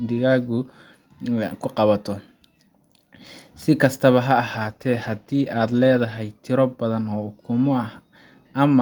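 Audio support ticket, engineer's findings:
Call bitrate drop, 4.52 to 6.29 s. Speech turns rough and watery, with top end dulled, then clears. Fits a fall from roughly 48 kbps to about 17 kbps. Floor held for 1.7 s. Probable component: encoder rate control following a lowered bandwidth estimate. Mechanism: Opus coding coarser at the reduced rate, trimming high frequencies. Quality returns once the bitrate recovers.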